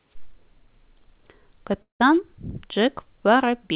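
From 1.82 to 2.02 s the sound smears into a fading buzz and then drops to silence for roughly 130 ms before resuming, with about 180 ms never heard. This is likely a long network dropout, the receiver concealing the gap briefly before giving up, all within audio that stops at 4 kHz.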